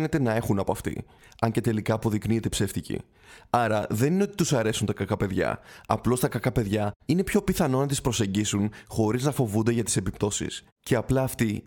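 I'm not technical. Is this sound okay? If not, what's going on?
Yes, this sound is okay, and nothing is going wrong in it.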